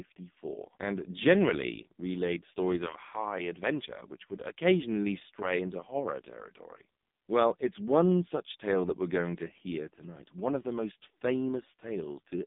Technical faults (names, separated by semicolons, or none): AMR narrowband mobile codec